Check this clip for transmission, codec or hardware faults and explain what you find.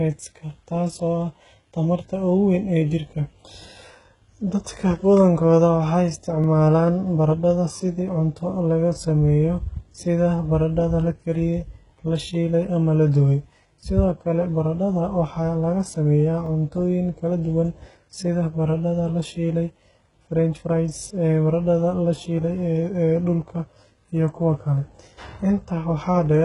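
Two faults: heavy low-bitrate compression across the whole speech clip, and two stutters where processing chunks overlap.

Throughout, the speech has likely passed through HE-AAC compression at a very low rate, which fits roughly 12 kbps. The codec spends its bits on the lower spectrum and synthesises the treble by copying lower bands upward under a coarse envelope, so the rebuilt harmonics don't line up with the real ones. Nothing survives above 11.1 kHz, and the damage is heavy: sibilants come out gritty, metallic and lisped.

At 6.44–6.46 s and again at 16.46–16.49 s there are overlapping chunks. The audio was handled in blocks that fit a 10-second chunk length, and each new block began before the previous one finished, so about 25 ms of sound plays twice at each join. Each duplicated sliver is heard as a brief click or stutter, and the two repeats fall about 10 s apart.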